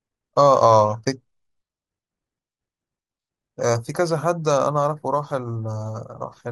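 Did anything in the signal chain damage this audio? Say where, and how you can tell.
No, nothing in the chain stood out as damaging this speech on listening.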